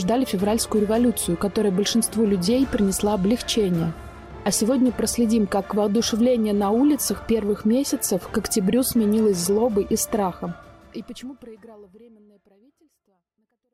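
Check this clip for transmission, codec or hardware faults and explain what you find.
No transmission, codec or hardware faults can be heard. Near the end the level tapers off in a smooth fade from around 10 s down to 13.7 s, with no click or hard edge, just as an editor would shape it.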